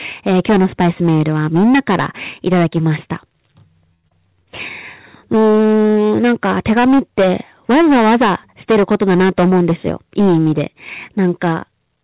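Hard clipping runs through the whole clip: the speech was driven about 12 dB past what one stage could pass, so roughly a sixth of the samples are sliced flat. The flattened peaks add high harmonics, heard as a harsh fuzz on every loud syllable, sitting inside a band that stops at 4 kHz, which fits a G.711 mu-law call path.

A short stall from a late packet occurs from 3.94 to 4.06 s. The packet arrived late and the jitter buffer ran dry, so the receiver held the last sound for 96 ms before resuming at the same point. Nothing is lost, but one sound drags with a slight buzz or dip.

A skip ahead follows from 4.08 to 4.13 s. With later audio already queued, roughly 70 ms of speech was discarded to pull the delay back down. About 30 ms of fill bridges the jump, and the two sides are joined almost directly.

A jitter buffer slow-down runs from 4.27 to 4.46 s. Needing reserve again, the receiver repeated pitch periods, adding 46 ms and playing at 80% speed. 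The pitch stays put while the sounds stretch out.

A jitter buffer speed-up runs from 9.03 to 9.65 s. With too much audio buffered, the receiver trimmed short pitch-period pieces, roughly 70 ms in all, for 112% speed. The speech sounds hurried at unchanged pitch.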